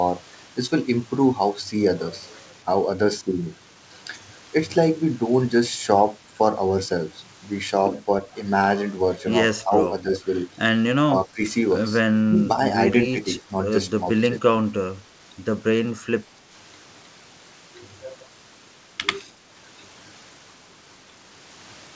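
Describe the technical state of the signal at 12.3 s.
Speech suppressed in double talk, 12.27 to 12.49 s: the speech briefly dips about 10 dB, likely an echo canceller muting it as echo while both sides talked.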